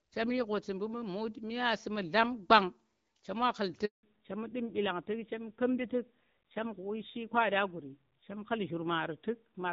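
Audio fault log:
3.85 to 4.03 s, handover gap: the call was passed from one network to another and no speech frames arrived during the switch. The speech cuts out within a few tens of milliseconds and stays silent for 180 ms until the new link takes over, and what was said in that span is lost.
4.03 s to end, fallback to narrowband: after the handover the call dropped from HD Voice to an older narrowband codec. Everything above 4 kHz disappears, so the speech turns duller and rougher, a sound that fits a low-rate narrowband mode around 7.4 kbit/s after the light wideband coding heard earlier.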